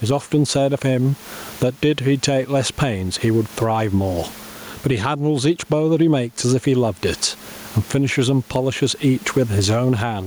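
Gain pumping runs through the whole speech clip, with the gain swinging by around 15 dB. The room noise sits about 36 dB below the speech. Likely cause: gain set far too high, with a fast limiter clamping down.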